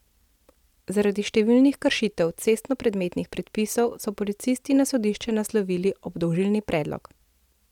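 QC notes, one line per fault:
No faults found.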